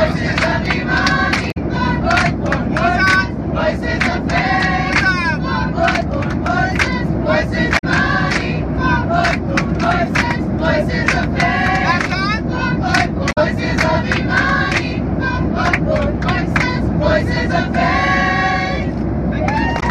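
Damaged data in a compressed stream shows up as four brief glitches, at 1.48–1.57 s, 7.75–7.84 s, 13.29–13.38 s and 19.76–19.83 s. Corrupted bytes make the decoder misread those frames, lose sync and search for the next frame header.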